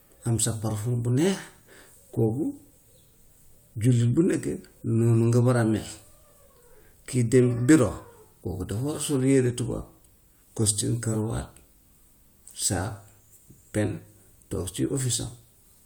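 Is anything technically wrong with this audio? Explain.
No, nothing technically wrong can be heard in this speech recording. The audio holds steady across the whole clip, with no audible disturbance at any point.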